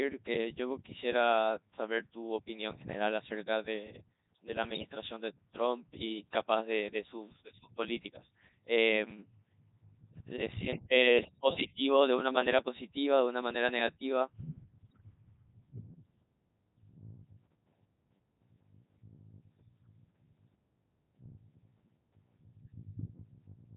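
Throughout, the speech has passed through the Codec 2 vocoder at 3.2 kbit/s. It transmits only pitch, voicing, energy and a spectral envelope, and the decoder rebuilds the voice from sine waves. The waveform itself is lost, so the speech sounds heavily robotic and buzzy.

From 14.90 to 15.01 s, bit errors on digital voice radio corrupt the vocoder's parameters, with something like one bit in twenty flipped. The synthetic voice lurches in pitch, level and tone colour into a brief warbling bleep, a span that fits a handful of damaged frames.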